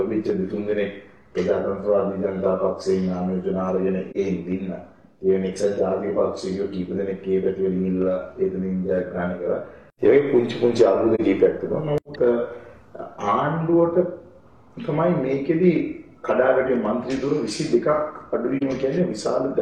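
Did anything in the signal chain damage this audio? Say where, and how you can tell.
Yes: AAC frame loss with muting, at codec decoding after transmission, in three brief dropouts at 4.10–4.16 s, 11.15–11.21 s and 18.57–18.63 s. Each gap lasts about 60 ms and fades out and back in rather than cutting off sharply, which fits a single lost frame of about 43 ms. The decoder filled the missing frame's spectrum with zeros, and the overlapping transform windows smeared that silence into a brief dip.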